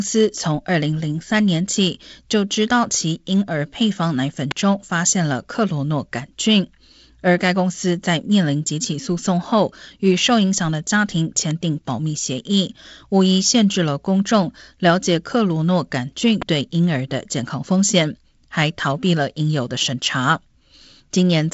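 Speech clip, and what stands out are three sharp snaps riding on top of the talking, at 4.51, 11.51 and 16.42 seconds. Each is a tight little click burst lasting well under 10 ms. That's the classic electrical switching spike, most likely a nearby switch, relay, motor or static discharge arcing briefly and getting picked up by the audio line. The audio also comes through G.722 wideband telephone coding: nothing above about 7.7 kHz, a faint upper-band hiss and a slightly grainy low band, which fits the 48 kbit/s mode.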